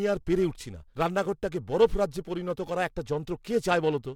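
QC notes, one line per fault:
Throughout, periodic clock jitter: sidebands about 1 kHz either side of each component add a metallic roughness, strongest up high and absent in pauses, unlike hum.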